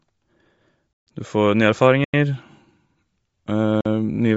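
From the start the speech has a breathy, grainy edge, and nothing reaches above about 7.7 kHz, so the top of the band sounds hollowed and filled with hiss. This is plainly audible Bluetooth LC3 compression, likely at a low rate around 32 kbps with 10 ms frames. The codec discards much of the upper spectrum to fit the rate and fills it back with noise.

At 0.93 s the sound drops abruptly to dead silence until 1.07 s, a hole of about 139 ms. Then come a 93 ms dropout from 2.04 to 2.14 s and a 46 ms one from 3.81 to 3.85 s. These are blocks of digital silence: zeros went out instead of audio, most likely because the output buffer was not filled in time. The two shorter gaps fit buffers of 4096 and 2048 samples.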